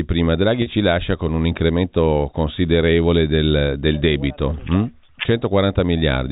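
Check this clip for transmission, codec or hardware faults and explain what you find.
One transmission fault stands out in the speech, heard over a G.711 telephone path with its 4 kHz ceiling. Packet loss with pitch repetition occurs from 0.62 to 0.66 s, just before "ci lascia con un". About 40 ms went missing, which fits two 20 ms packets. The receiver bridged the gap by looping the last pitch period, so it sounds like a brief held buzz rather than the silent hole or click of a plain dropout.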